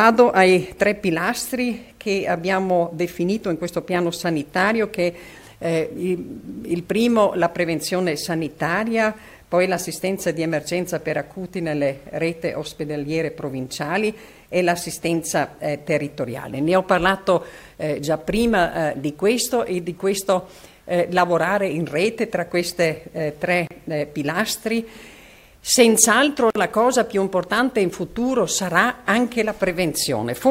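At 23.67 s and 26.50 s, brief silences of 34 ms and 51 ms open. Each is a gap at a join of encoded pieces, where untrimmed encoder padding remains. The sound then resumes unchanged.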